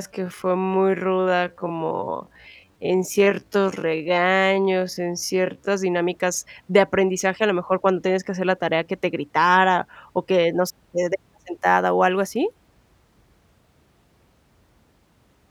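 From the start to 5.72 s the speech runs at roughly half speed with unchanged pitch, dragging, a time-stretched section, likely stretched to fill a length, snapping to normal pace at "dinámicas de aprendizaje a".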